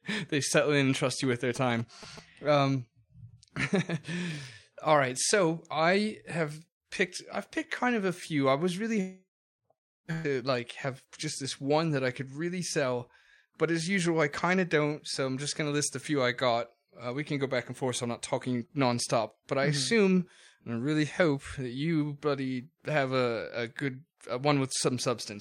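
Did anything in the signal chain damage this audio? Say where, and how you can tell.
Yes. GSM signalling bursts sit in the analogue wiring from 1.23 to 2.19 s, just after "settle in and trust": a galloping dit-dit-dit run of short buzzes at 217 Hz, roughly 15 dB below the speech. A nearby 2G phone was exchanging signalling bursts with its network, and the audio circuit rectified that radio energy into audio, so the burst repetition rate appears directly as the buzz frequency.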